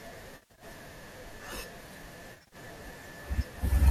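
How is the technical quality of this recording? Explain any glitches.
There are two glitches, both AAC frame loss with concealment, sitting on top of a light, slightly grainy coding texture that's likely from low-delay AAC compression at a modest bitrate, around 64 kbps.

The first runs from 0.32 to 0.64 s. About 200 ms of audio goes missing in bursts spread over 280 ms, with the longest gap around 70 ms. The second runs from 2.34 to 2.56 s, with about 140 ms lost over 180 ms and the longest gap around 40 ms. The dropouts come in small chunks, which fits short frames of roughly 10 ms. Each time a chunk fails to arrive, the decoder patches the hole by reusing the last good spectrum with its phases scrambled. The gaps are short, so the patch never has time to fade to silence. Instead you hear a smeared, slightly noisy, phasey blur where the speech should be crisp, and the first patch covers more lost audio than the second.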